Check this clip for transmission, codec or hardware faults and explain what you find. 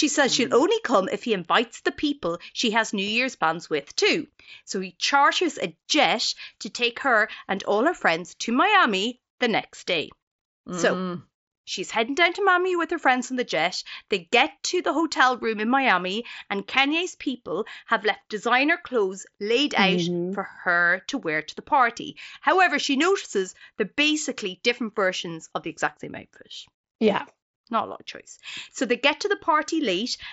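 No transmission, codec or hardware fault shows up anywhere in this speech clip. It has the sound of a Bluetooth mSBC headset codec link working as intended, with the speech band reaching up to about 8 kHz and a light grain on the louder sounds that is normal for that wideband headset path.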